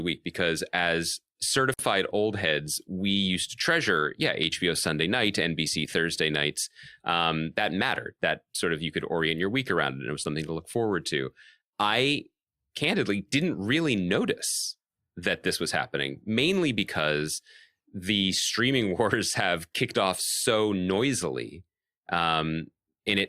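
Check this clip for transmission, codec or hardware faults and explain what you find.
One fault is present in this speech: a gap at a join of encoded pieces, from 1.74 to 1.79 s, between "week because as" and "old heads we used". Two separately encoded segments appear to have been joined without trimming, so the first segment's padded final frame and the second segment's start-up delay both remain. The result is a gap of about 52 ms with edges smeared by the codec. The speech then resumes exactly where it stopped, with nothing missing.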